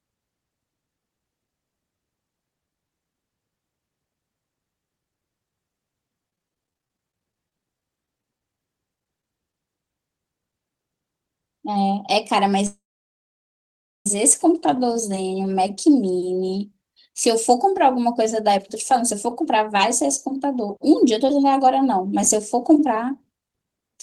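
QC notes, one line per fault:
6.30–8.41 s and 8.95–9.54 s: repeated packet loss (robotic sound), 26 then 5 short holes patched by extending prior audio, leaving choppy speech with fragments missing.
10.51 s and 10.78 s: short concealed packet loss, each roughly 10 ms dropped and filled from the preceding sound, heard as a brief smear or wobble.
12.66–14.07 s: call audio freeze, speech stops for about 1.4 s, mostly silence after a fading tail, then resumes where it halted; likely delayed packets draining the jitter buffer.
18.49–23.98 s: jitter buffer speed-up, speech runs about 7% fast at unchanged pitch as small pitch-period slices totalling roughly 0.4 s are trimmed, sounding hurried.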